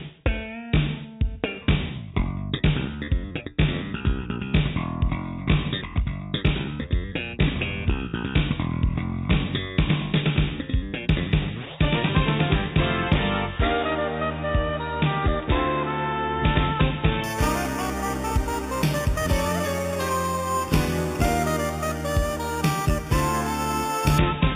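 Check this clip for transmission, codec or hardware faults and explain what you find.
One fault is present: imaging from sample-and-hold upsampling, from 17.24 s to 24.18 s. Each sample was simply repeated, which fits a rise from 8 kHz to 44.1 kHz, so spectral mirror copies went unfiltered. The first image fills 4 to 8 kHz, about 15 dB below the sound. It is a metallic fizz that follows the sound's level and moves against its pitch. A spectrogram shows flipped copies above 4 kHz, and the waveform looks stair-stepped.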